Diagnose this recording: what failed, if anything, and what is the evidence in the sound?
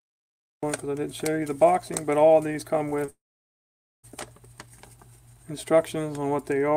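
The recording has a cut-off start, a storage or capture fault. The first 0.63 s is digital silence. At 0.63 s the sound begins abruptly, already in progress. There is no attack and no fade-in. This means the capture or stream began after the sound had started. The file opens partway through it, and the beginning of that sound is gone.

Two short concealed packet losses come from the network stage. The first runs from 2.89 to 2.93 s, and the second from 3.05 to 3.10 s. Each gap is about 20 ms. Both are heard as a brief smear in the sound. In each case that slice of audio arrived too late for the decoder. The receiver extended the preceding sound to fill the hole, then blended back into the real signal.

A long network dropout follows directly at 3.10 s. For about 0.94 s no real audio plays. The preceding sound is stretched into a buzz or hiss that fades within the first tenth of a second. 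After that comes about 0.86 s of silence. The audio returns at 4.05 s, further along, with the missing stretch simply absent. The likely cause is packets ceasing to arrive for almost a second, so concealment ran out.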